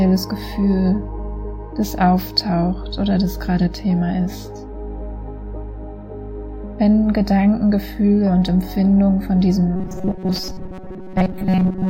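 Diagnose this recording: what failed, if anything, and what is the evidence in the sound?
From 9.76 s through to the end, the sound collapses into a rigid, metallic buzz at 188 Hz: robotic sound from repeated short buffers, likely a starved driver or buffer stage replaying the last chunk of about 5.3 ms whenever fresh audio fails to arrive. Roughly two-thirds or more of the signal in that stretch is repetition rather than new material. A steady pitch locked to the chunk period separates this from codec warble or comb filtering, which do not impose one fixed tone.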